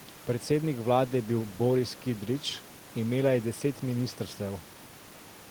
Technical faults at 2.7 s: none

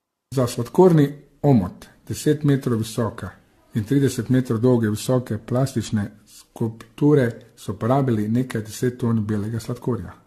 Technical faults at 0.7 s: generation loss

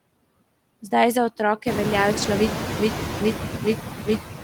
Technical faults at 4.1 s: noise suppressor artifacts; stutter with silent gaps

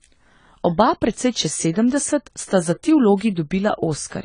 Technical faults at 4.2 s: AAC compression

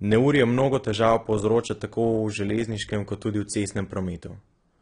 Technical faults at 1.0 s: AAC compression

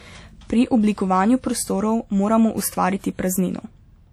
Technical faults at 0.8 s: low-bitrate audio saved at a high bitrate

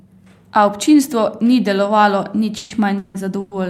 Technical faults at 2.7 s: call audio freeze

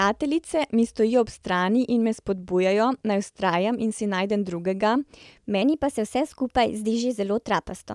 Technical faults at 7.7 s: wrong sample rate

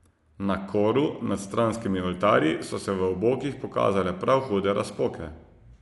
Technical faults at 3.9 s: Dolby Digital compression

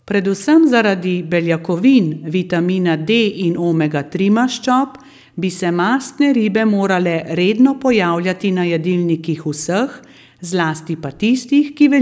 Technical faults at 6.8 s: none

